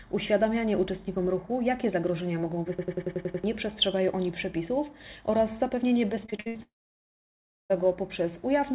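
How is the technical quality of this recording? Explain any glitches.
The recording has three clear glitches, and the whole clip sounds band-limited with nothing above 4 kHz, consistent with a narrowband call codec such as G.711.

From 2.79 to 3.44 s there is a machine-gun stutter. This is a system hang loop: playback froze while the hardware kept cycling a 92.9 ms chunk at about 10.8 Hz, which fits a 4096-sample buffer. About 0.7 s of audio is lost.

From 6.26 to 6.57 s the sound turns choppy, with pieces missing. This is repeated packet loss, with five gaps of up to 70 ms each. Each gap was patched by continuing the previous sound, covering about 61% of that stretch.

From 6.63 to 7.72 s a brief fading buzz or hiss drops into about a second of silence before the sound resumes. This was likely a long network dropout, and the missing audio is gone.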